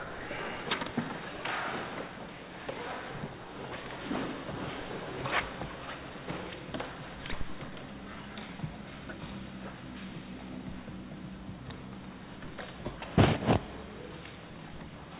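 No technical faults are audible.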